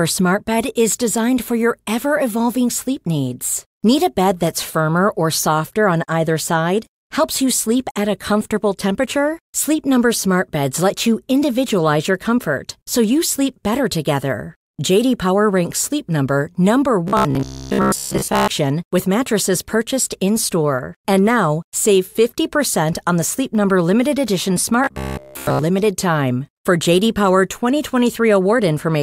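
Speech, where new audio likely arrived too seldom from 17.08 to 18.48 s and 24.84 to 25.62 s, so a roughly 15 ms buffer was replayed over most of each gap. The result is robotic sound from repeated short buffers: a rigid, metallic 66.8 Hz buzz loosely following the speech.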